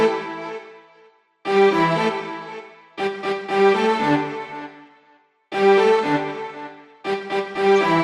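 Throughout, the sound is dull, gurgling and granular, likely from MP2 compression at a low rate near 80 kbps. Unlike burbling, this damage is steady and never lets up.

From 4.48 to 4.61 s and from 7.55 to 7.72 s, DAB burbling breaks in. Bit errors corrupt samples in single sub-bands, causing brief blips of noise, separate bursts on top of the constant dullness.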